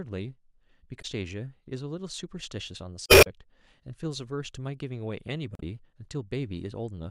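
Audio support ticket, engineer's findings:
Three short glitches breaking into the speech at 0.98 to 1.05 s, 3.05 to 3.27 s (longest, about 0.22 s) and 5.53 to 5.63 s. Consistent with damaged data in a compressed stream: corrupted or lost bytes in the encoded file, decoder misreads those frames, loses sync, resumes at next valid frame header. Probable component: storage or transport upstream of the decoder, not the playback chain.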